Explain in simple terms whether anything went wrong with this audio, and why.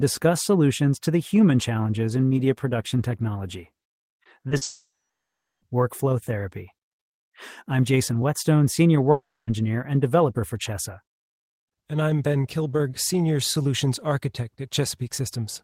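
Right after "in media production technology", from 4.09 to 4.63 s, the speech turns choppy and robotic. This is repeated packet loss: four short gaps, each patched by repeating the last sound.

From 4.63 to 5.63 s, just before "workflow therapy", and again from 9.11 to 9.49 s, the sound smears into a fading buzz, goes silent, then resumes with speech missing. This is likely a long network dropout.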